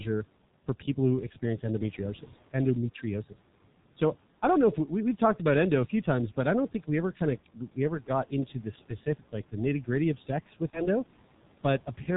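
Throughout, the G.723.1 codec leaves the speech muffled, hoarse and cut off above 4 kHz, with blurred consonants. This fits a rate near 6 kbit/s, not simple band-limiting.

At 10.70 s, after "of sex with", VoIP packet loss concealed by the speech codec stretches the sound and lets it fade until 10.88 s. This fits one lost 30 ms frame, and the lingering weakness distinguishes it from a silent dropout.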